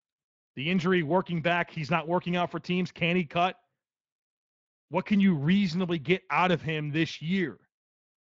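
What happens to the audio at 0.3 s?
At 0.3 s the speech is intact, with no fault at that moment.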